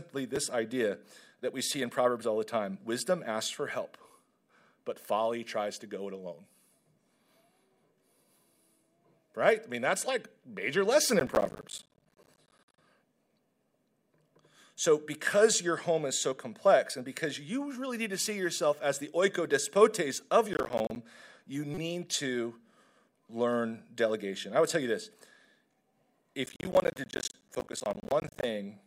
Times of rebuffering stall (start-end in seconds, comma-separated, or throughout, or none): none